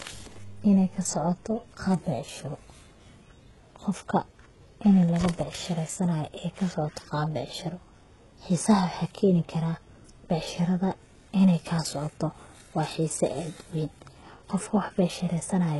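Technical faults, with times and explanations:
Throughout, HE-AAC compression: sibilants sound gritty and lispy, likely from band-replicated treble at a 12 kbps stream; spectrogram shows duplicated upper bands, nothing above 11.5 kHz.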